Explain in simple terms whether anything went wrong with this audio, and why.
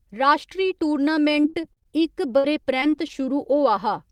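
Two things went wrong. From 1.33 to 1.87 s and again from 2.39 to 3.11 s there is repeated packet loss, which gives a robotic sound. Pieces of the speech went missing, seven short holes in the first stretch and four in the second. The player filled each hole by stretching the previous sound, so the speech turns choppy.

From 2.76 to 3.72 s there is a jitter buffer slow-down. The receiver was running short of audio in reserve, or had just raised how much it wanted to keep, so it repeated tiny slices of the speech to build it back up. That adds about 54 ms and plays at about 95% speed, so the sound is slightly drawn out with the pitch unchanged. Unlike the packet loss, the slow-down itself removes nothing. It only stretches the speech.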